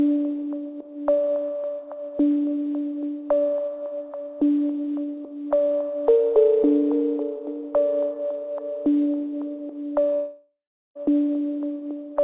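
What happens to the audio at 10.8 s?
At 10.8 s you're in the middle of a gap from 10.14 to 10.97 s, likely a long network dropout. The last sound gets stretched into a fading buzz, then goes quiet for roughly the final 0.4 s before audio resumes, with about 0.82 s simply missing.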